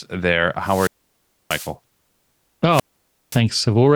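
At 0.61 s the speech suffers a wireless microphone squelch dropout lasting until 1.74 s: the radio link weakens, hiss swells, then the receiver's squelch mutes everything for about 0.64 s before the speech returns. A second dropout runs from 2.70 to 3.41 s, with a 0.53 s mute. On a spectrogram each shows a brief band of broadband noise followed by a blank gap; the waveform flattens to near zero.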